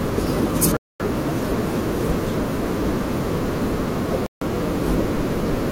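Bluetooth stalls at 0.77 s and 4.26 s cut the speech to silence for 233 ms and 152 ms, then it resumes. Radio interference likely delayed packets until the headphone buffer emptied, pausing playback while retransmissions caught up.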